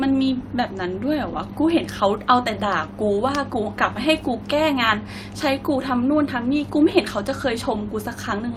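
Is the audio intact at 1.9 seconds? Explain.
Yes, at 1.9 seconds the speech plays through intact, with no audible fault at that moment.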